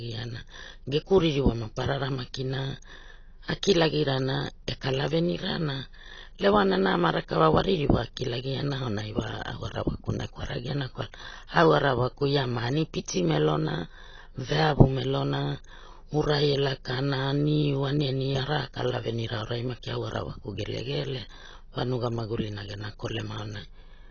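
AAC compression runs through the whole clip: the speech has no content above 6.6 kHz, and the dull, smeared tone with a warbling, fizzy edge on sibilants likely comes from AAC-LC at a low bitrate, consistent with roughly 24 kbps, quantising frequency lines coarsely.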